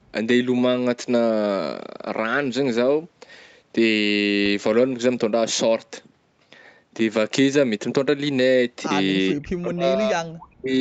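From 9.32 to 10.75 s the speech drops sharply, by about 40 dB at its deepest, for roughly one and a half seconds. This is likely speech suppressed in double talk, where the echo canceller mistook overlapping talk for loudspeaker echo and attenuated it.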